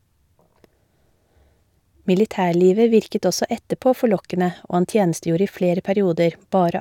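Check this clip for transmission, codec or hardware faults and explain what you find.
Nothing stood out on listening to this speech recording.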